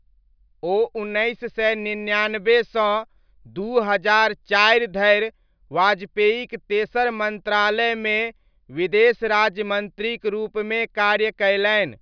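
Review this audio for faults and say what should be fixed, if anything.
Nothing needs fixing here: the speech signal comes through intact and continuous, with no technical faults to address.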